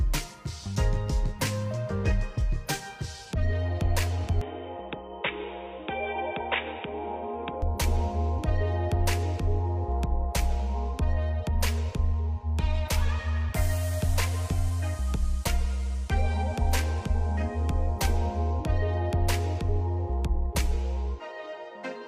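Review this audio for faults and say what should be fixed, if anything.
From 4.41 s to 7.62 s the sound turns dull and boxy. Nothing reaches above 3.8 kHz. It also drops by about 5 dB, with a new noise floor roughly 50 dB below the signal. The change is abrupt, with no gap at either edge. This is likely an input switched to a poorer device, such as a headset in call mode. Its narrow band and its own tone replace the original microphone until it switches back. Lock the input device and disable automatic switching before recording.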